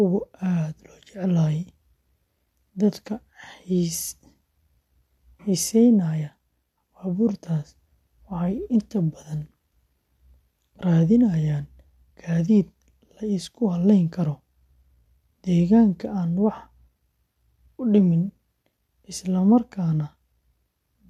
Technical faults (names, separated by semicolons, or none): none